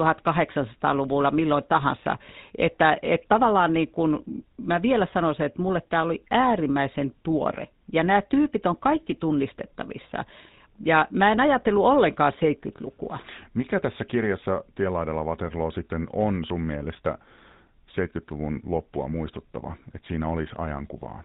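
From start to end, the speech passed through a GSM full-rate codec at a rate that fits 13 kbps, leaving everything above 4 kHz cut and a buzzy, gravelly roughness.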